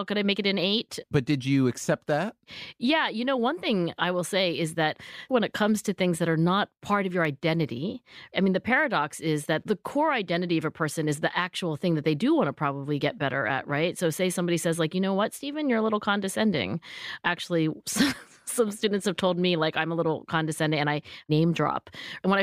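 At 7.25 s, between "not part of your" and "identity I mean the", a block of digital silence lasting 0.39 ms cuts the speech out and back instantly, heard as a single tick rather than a gap.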